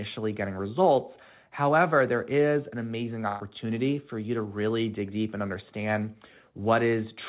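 At 3.28 to 3.42 s, between "there is an amazing" and "for you to really", a burst of packet loss is concealed: about 120 ms of speech is lost and the last sound is extended and faded rather than left silent, then the speech resumes further on. Unlike a plain dropout, there is no hole of silence.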